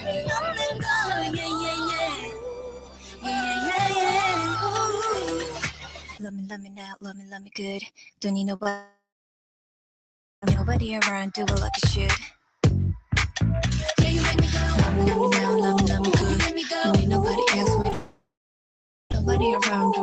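Throughout the clip the level pumps and thins: held sound sinks while attacks push through, a swing of roughly 15 dB. A noise suppressor built for speech was left running on music or sounds. It mistakes sustained tones, ambience and decays for noise and pulls them down.

The sound cut by the noise suppressor is clearest from 0.00 to 0.89 s (down about 10 dB), 1.07 to 3.67 s and 4.95 to 8.23 s (both down about 17 dB), and 12.30 to 12.62 s (about 16 dB). In each stretch, sustained or fading sound sags and its tail is clipped short.

At 8.55 s and again from 8.63 to 8.67 s there are brief smears, about 40 ms and then 20 ms long. This is short concealed packet loss. The audio never reached the decoder in time, so the receiver stretched the preceding sound across each hole and then blended back into the real signal.

From 8.69 to 10.44 s the sound turns into a fading continuation of itself and then goes quiet for roughly 1.4 s before resuming further along. 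From 17.93 to 19.12 s the same thing happens, with about 0.8 s of silence. The likely cause is a long network dropout: nothing arrived, the receiver extended the last sound until it decayed, and that material is gone.

Around that second dropout, between 17.82 and 19.15 s, roughly three small gaps of up to about 20 ms add little ticks and hiccups. These are scattered short gaps, isolated lost or late packets, each patched by continuing the sound just before it. The whole clip stops near 8 kHz, as the call path's codec bandwidth sets it.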